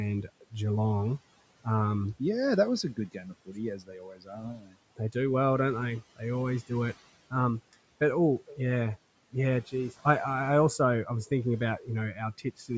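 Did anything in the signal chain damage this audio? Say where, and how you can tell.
Yes. The damage is in call processing: speech cut by the noise suppressor. Between 2.83 and 5.15 s, about a second's worth of speech gets pulled down by as much as about 19 dB, and from 11.79 to 12.71 s roughly a third of a second drops by about 15 dB. Those stretches sound swallowed and faint. The suppressor mistook quiet speech for the room noise, which sits about 22 dB under the talker, and gated it along with that noise.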